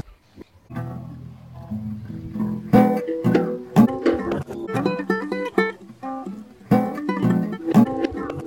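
Nothing goes wrong anywhere in the clip, so there's no fault to point to at any moment.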